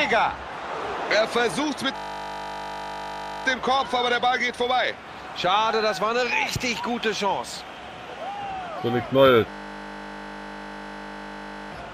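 From 1.96 to 3.46 s, and again from 9.5 to 11.72 s, a system hang loop replaces the sound with a steady buzz. The system stalled while the playback hardware kept replaying the same ring buffer, so one 20 ms slice of audio repeats exactly, giving a 50 Hz drone rather than a stutter. Little or no audio appears to be lost. When playback recovers, the sound resumes.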